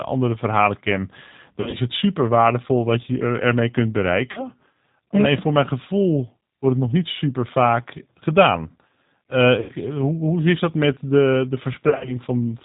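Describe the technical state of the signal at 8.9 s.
At 8.9 s the speech sounds muffled, slightly rough and synthetic, with nothing above 4 kHz. This is G.729 codec damage across the whole clip, rebuilt from a vocal tract filter and sparse pulses, consistent with 8 kbit/s.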